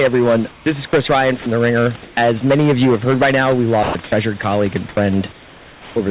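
Hard clipping runs through the whole recording. The speech is driven about 14 dB past what the signal chain can carry, so the peaks are sliced flat, affecting a small but steady share of the samples. The squared-off tops throw harmonics upward, heard as a harsh fuzz on every loud syllable. Because the band already stops at 4 kHz on this narrowband call path, the distortion sits inside the band instead of hissing above it, unlike codec noise, which stays present at low levels.

From 0.51 to 1.46 s the sound is chopped by the voice detector. The sender likely switched transmission off and on repeatedly, so about 260 ms in total of quiet syllables and word edges is replaced by synthetic fill. Packet loss would instead leave clicks or concealment smears.

From 2.03 to 2.17 s, comfort noise replaces the background for about 140 ms. The real room tone, which sits about 26 dB below the loud speech, is likely swapped for featureless generated noise about 4 dB quieter. 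The result is a brief, even dip in the ambience with no speech cut, which is what separates it from chopping.

From 3.83 to 5.96 s, just after "heard by now we", the voice detector chops the sound again and likely removes about 930 ms spread across the stretch. Quiet syllables and word edges vanish into the same flat synthetic background.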